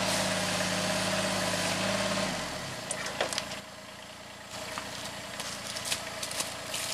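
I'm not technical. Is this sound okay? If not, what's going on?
No. A steady, high-pitched whine runs underneath the whole clip. It is a fixed tone at 1 kHz, with its strongest part an octave higher at 2 kHz, and it is clearly audible, not buried. This is USB whine. A USB connection does its work in rapid, regular bursts a thousand times a second, and that rhythm can leak into the audio through shared power or ground wiring, where it becomes a constant tone.

There is also a sudden gain jump. At 3.60 s everything abruptly becomes noticeably quieter, the background included, and at 4.53 s it snaps back to the earlier loudness. The change happens instantly, with no gradual fade. The likely cause is a digital volume setting being switched from one moment to the next, without smoothing, so the whole sound drops and returns in single steps.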